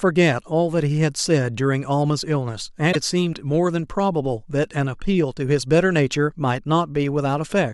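At 2.91 to 2.96 s the speech jumps forward. This is likely a broken MP3 bit reservoir: frames were cut, so following frames read borrowed bits from the wrong data. The glitch lasts about two 26.1 ms frames.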